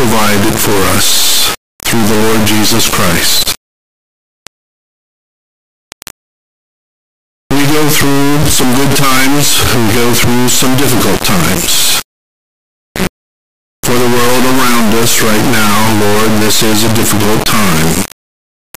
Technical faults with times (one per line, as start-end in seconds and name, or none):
0.00-18.77 integer read as float